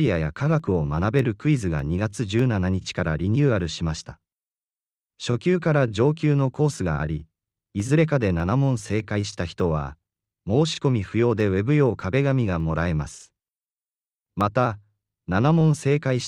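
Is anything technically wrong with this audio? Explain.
Yes. From 0.6 s to 16.2 s, just after "アや科", a regular click recurs about every 0.6 s while the speech continues. This is likely clock drift buffer slips: two clocks disagree by roughly 700 ppm, so the buffer repeatedly drops or repeats a small block of about 15 samples, and each slip clicks.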